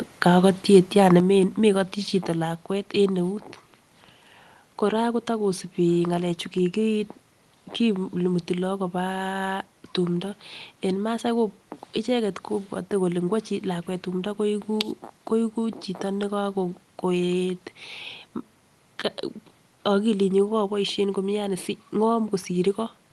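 At 0.74 to 0.77 s the loudest syllable turns harsh and crackly. This is a brief microphone overload: peaks are pushed about 2 dB past the converter's ceiling and their tops are flattened, likely because the input volume was set too high. Unlike codec noise, this distortion sits only on that brief stretch.

The microphone volume then steps down twice, by about 6 dB at 1.2 s and by about 3 dB at 2.22 s, likely the call software lowering input gain after the overload. Voice and background drop together in a single instant, with no gradual fade or compressor-style pumping.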